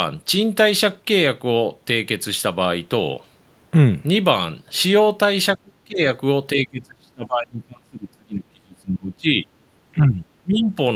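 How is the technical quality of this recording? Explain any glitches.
The speech repeatedly drops away in the second half, from 5.56 to 6.06 s, 6.53 to 9.47 s and 9.93 to 10.77 s. The voice sinks by roughly 30 dB in the first two stretches and about 20 dB in the last, thinning and breaking into fragments. This is speech suppressed in double talk, likely from an echo canceller that, with both sides talking together, could not tell this voice from returning loudspeaker echo and attenuated everything.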